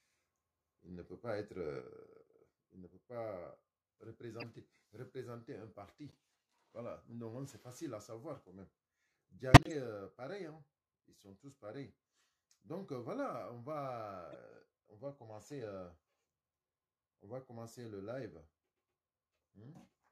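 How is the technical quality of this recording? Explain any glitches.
The recording has two clear technical problems: a lasting level drop early on and four short decoding glitches.

From 1.81 s to the end, the level falls abruptly by about 6 dB. This is likely a channel dropout: one stereo channel is lost, so after mono summing only half of the shared signal remains, and anything carried only by the missing side vanishes. On a waveform the envelope steps down to roughly half its height at that instant and stays there. A spectrogram shows every band dimming together.

Corrupt frames were decoded at 4.40–4.44 s, 6.11–6.14 s, 9.51–9.72 s and 14.32–14.35 s. Damaged bits in compressed frames were played through, so misread gains and codes put energy at the wrong frequencies for the length of each frame. These sound like chirps or blips. The one at 9.51 s is the longest and loudest, spanning several frames and peaking near −10 dBFS. 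The one at 6.11 s is very faint. On a spectrogram each appears as a short blocky patch of misplaced energy, and the 9.5 s event also shows as a visible spike in the waveform.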